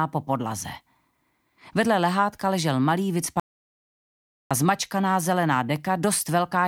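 The audio has an audio dropout to silence from 3.40 to 4.51 s. About 1.1 s of sound is lost. The gap is silent, with no room tone. The likely cause is a lost input, such as a brief disconnect or mute.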